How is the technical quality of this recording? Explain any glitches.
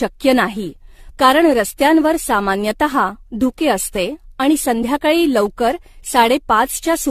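The recording has an audible lossy-coding fault that runs through the whole clip: generation loss. From start to finish the speech sounds swirly, hollow and smeared, with consonant attacks blurred, and the spectrum stops at 14 kHz. This is likely the result of the audio being decoded and re-encoded around ten times, which fits a chain of AAC-LC passes near 64 kbit/s. Each pass requantises on a shifted frame grid, so noise and spectral holes pile up beyond what one encode at that rate would leave.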